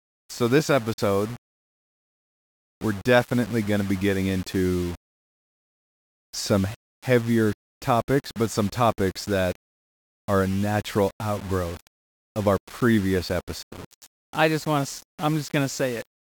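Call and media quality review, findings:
Low bit depth without dither, throughout: grainy, buzzy distortion tracking the speech, harshest on quiet syllables and decays, error roughly 20 dB below signal. Likely rounding to a coarse word length without dither, consistent with about 6 bits, so the error follows the waveform instead of sitting as steady hiss.

Bluetooth dropout, 0.93 to 1.00 s: hard-edged silent hole, speech resumes further on as if it kept playing. Likely link packets missing their deadline at the headset, gap fitting about two lost frames.

Bluetooth dropout, 13.63 to 13.73 s: longer abrupt mute with the same skip-ahead on resumption. Packet loss on the same wireless path, fitting about four lost frames.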